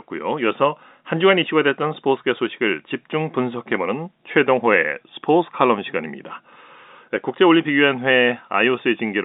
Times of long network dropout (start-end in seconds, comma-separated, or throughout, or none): none